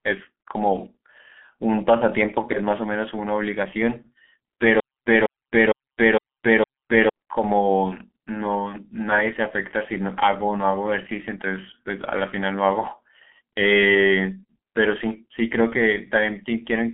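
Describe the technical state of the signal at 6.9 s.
At 6.9 s the sound is caught in a stutter with silent gaps: the same 198 ms burst repeats five times between 4.8 and 7.09 s, each followed by about 260 ms of dead silence. This is likely a stalled player replaying its last fragment. Throughout, the audio is muffled and hoarse with smeared consonants and nothing above 3.8 kHz, the heavy damage of the G.723.1 codec at 6.3 kbit/s.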